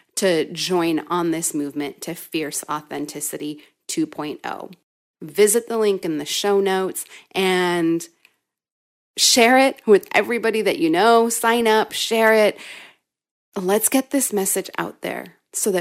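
From 11.61 to 11.66 s, between "everybody that you know" and "up share it", DAB burbling appears as a brief burst of short noise blips. Bit errors at a low rate, around 0.15 percent, slipped past error correction, corrupting MP2 audio samples so short blips of noise appeared in single sub-bands.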